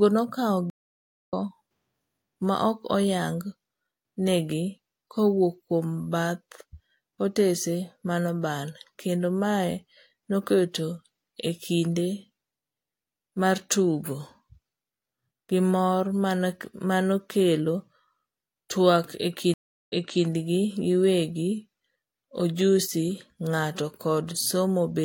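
A speech clip with two stream reconnect dropouts: at 0.70–1.33 s a 586 ms blank gap, resuming about 0.7 s later; at 19.54–20.25 s a 340 ms gap, resuming 0.37 s earlier. Both appear as flat waveform gaps and empty spectrogram columns.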